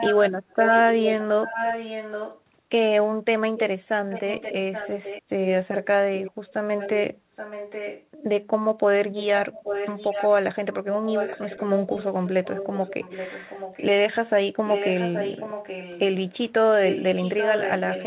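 From the very start to 2.41 s there's an echo leak: a copy of the speech comes back roughly 0.83 s late, only a little below the direct voice. It recurs at 3.57 to 5.22 s (much fainter), 5.8 to 8.06 s and 9.17 to 13.86 s (moderate), and 14.66 s to the end (strong again). The likely cause is a far-end speakerphone whose echo canceller let its mic pickup through, all squeezed into the 4 kHz band of the narrowband call path.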